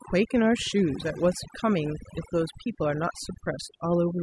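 Across the whole clip the speech shows overdone noise removal. The denoiser was pushed too hard, so any frequency band sitting near its noise estimate gets slammed down or cut, taking the quieter parts of the voice with it. You get near-silent gaps with twinkly specks.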